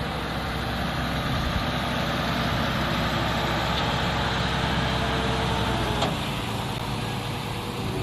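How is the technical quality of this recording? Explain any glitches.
There is one glitch: loose connector crackle from 6.72 to 6.81 s. A worn contact breaks and remakes, chopping the signal into a brief, irregular scratchy burst.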